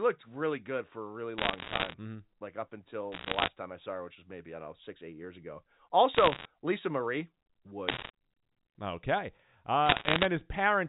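Bit errors on a digital phone line crackle through the speech at 1.38–1.94 s after "a really", 3.12–3.48 s after "like up", 6.15–6.45 s after "six eight years ago", 7.88–8.10 s, and 9.86–10.26 s. Roughly one to two percent of bits in the G.711 mu-law samples are flipped, and each hit on a sign or high-order bit throws a single sample far off, producing a sharp tick over the underlying speech.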